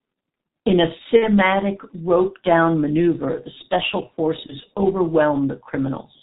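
Throughout, the speech is muffled and hoarse, with nothing above 4 kHz and smeared consonants, which points to the G.723.1 codec at roughly 6.3 kbit/s. Its slowly updated voice model blurs every transition, unlike plain low-pass filtering, which would leave consonant onsets crisp.

From 1.17 to 1.29 s, VoIP packet loss concealed by the speech codec stretches the sound into a fading buzzy tone or coloured noise, which fits about 60 ms of lost audio. At 4.46 to 4.56 s a shorter gap, fitting about 30 ms, does the same. Unlike a hard dropout, each gap is filled with a decaying buzz or noise, and the voice stays weak briefly afterward.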